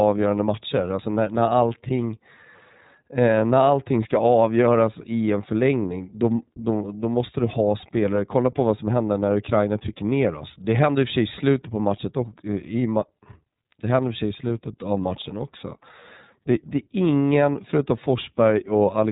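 Throughout the speech, the iLBC codec limits the band to nothing above 3.8 kHz. Each frame's excitation is coded independently, which fits 30 ms frames at roughly 13.3 kbps, and this leaves the voice plainly rough and synthetic.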